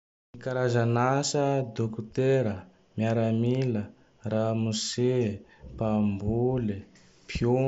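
No technical faults occur at any point in this speech, so there is nothing to set out in time order.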